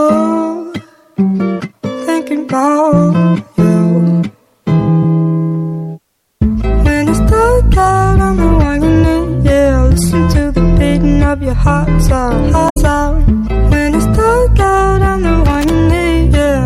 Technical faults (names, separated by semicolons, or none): damaged data in a compressed stream; loose connector crackle